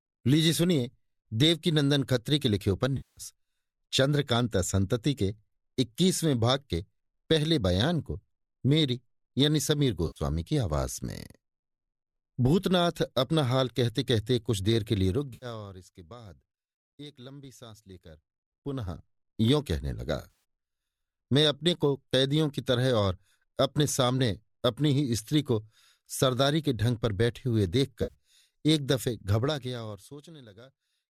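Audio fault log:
2.97–3.21 s, 10.07–10.19 s, 15.34–15.46 s, 20.30 s, 28.03–28.14 s: AAC frame loss with concealment. Compressed frames went missing and the decoder filled the gaps by reusing the last good spectrum with altered phase and energy, so each gap sounds like a brief smeared, phasey, noisy patch. The first gap is 200 ms long. The others are 90, 80 and 70 ms. At 20.30 s about 120 ms of loss is scattered over 140 ms, with the longest run about 70 ms. The lengths fit 10 ms frames.
15.05–15.84 s, 18.11–19.27 s, 29.30–30.42 s: zipper noise. The level moves in 1 dB steps at about twenty per second, with no smoothing between steps. Each jump puts a small discontinuity in the waveform, so a fast ticking rides on the sound for the whole change. The level drops by about 20 dB in the first run, rises by about 20 dB in the second and drops by about 25 dB in the third. The first run overlaps the frame loss at 15.34 s.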